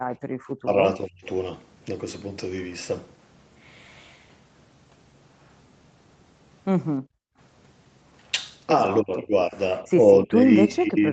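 Speech recorded over a call, with two echo-canceller faults. Background gated by the echo canceller dips the room sound while the loudspeaker plays, about 26 dB from 0.00 to 0.33 s and about 40 dB from 7.00 to 7.38 s. Speech suppressed in double talk instead ducks the talker's own voice, most likely because the canceller mistook it for loudspeaker echo while both sides spoke. It dips about 35 dB from 0.61 to 1.25 s, about 20 dB from 9.01 to 9.55 s, and about 25 dB from 10.22 s to the end.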